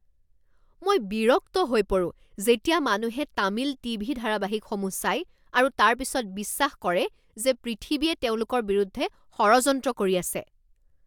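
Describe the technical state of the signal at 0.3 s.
At 0.3 s the speech signal is intact, with no audible fault at that moment.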